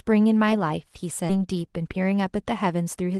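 A short speech clip sent over a call path, with two timing faults close together. At 1.29 s there is a skip ahead. Playback jumps forward with no gap filler. Roughly 0.7 s of speech is lost, and the two edges of the jump are butted almost directly together. The jump sounds like an abrupt splice. Audio that had queued up was discarded, so the delay fell by about the same amount. Right after, from 1.39 s to 3.19 s, the jitter buffer speed-up takes over. The buffer still held more audio than it wanted. The receiver trimmed away short pitch-period pieces again and again, around 200 ms in total. Speech runs at about 111% speed. Pitch stays the same, but the talking sounds hurried. The call codec's coding noise and top end near 12 kHz fit Opus at a modest bitrate.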